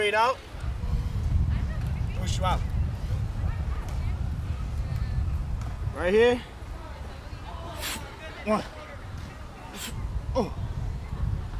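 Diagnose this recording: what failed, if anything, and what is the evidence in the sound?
Nothing in the recording points to a failure at any stage of the signal chain. No audible event marks a breakdown in capture, conversion, transmission, storage or playback.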